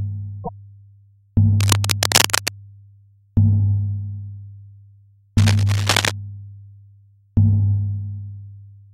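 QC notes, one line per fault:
1.60 to 2.48 s and 5.38 to 6.12 s, cable scratch noise: dense, irregular scratching and rustling bursts sit over the sound. The first is roughly as loud as the sound itself, the second somewhat quieter. This is likely a worn cable or connector being moved, its contact resistance fluctuating rapidly.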